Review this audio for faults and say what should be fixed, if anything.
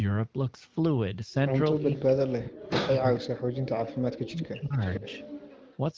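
Speech suppressed in double talk at 1.92–2.97 s, 3.18–3.73 s and 4.01–4.80 s: the speech dips by as much as about 40 dB, likely because the echo canceller confused overlapping talk with echo. A double-talk detector tuned to keep near-end speech at full level would prevent this.

Echo leak at 3.15–3.20 s and 4.81–5.77 s: a copy of the speech returns about 447 ms late and about 15 dB down, likely from loudspeaker sound the canceller missed. Better echo-path modelling, or a headset in place of the loudspeaker, would stop it.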